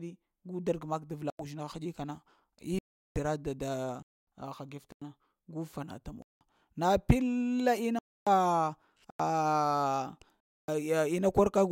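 Blocks of digital silence hit the speech at 1.30, 2.79, 4.02, 4.92, 6.22, 7.99, 9.10 and 10.40 s, lasting 93 to 372 ms. These are hard dropouts, most of them sized in buffers of 4096 samples or multiples of it.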